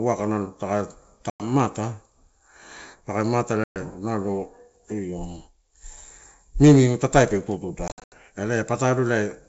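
Packet loss on an ADPCM call cuts hard-edged silent holes at 1.30 to 1.48 s (100 ms lost), 3.64 to 3.77 s (120 ms) and 7.88 to 8.14 s, where 180 ms of gaps are scattered over 240 ms and the longest run is 80 ms. Each time, the decoder's predictor and step size drift from the sender's, so the speech resumes with brief, slight distortion before settling.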